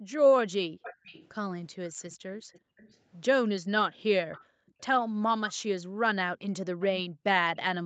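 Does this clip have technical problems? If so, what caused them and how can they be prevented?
Yes. The echo canceller repeatedly clamped the microphone while the far-end loudspeaker was active, producing background gated by the echo canceller. The room sound collapses by about 40 dB (about 36 dB in the second case) and then returns, at 0.0 to 0.83 s, 2.42 to 2.77 s, 4.45 to 6.03 s, and 7.08 s to the end. The longest stretch totals about 0.7 s. Gentler suppression and comfort-noise fill would keep the background steady.

An echo leak is also present. It likely comes from a loudspeaker-playback side whose canceller failed to remove everything its microphone picked up and sent the residue back. A faint delayed copy of the speech trails the original at 0.83 to 2.97 s (437 ms behind, about 20 dB down), 4.32 to 5.54 s (437 ms, about 25 dB down), and 6.8 s to the end (466 ms, about 25 dB down). 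Headsets or better echo-path adaptation on that side would prevent it. The audio above 8 kHz is absent, as expected from the call's Opus path.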